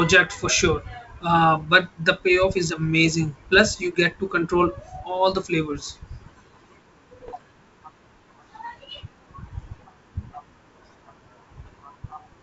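From 7.23 to 7.41 s, bit errors on an ADPCM link break into the G.722 wideband speech as pops and rough bursts. Each flipped bit upsets the decoder's step size and predictor, so the damage rings on briefly. A spectrogram shows broadband vertical streaks, and the waveform shows spikes and brief level jumps.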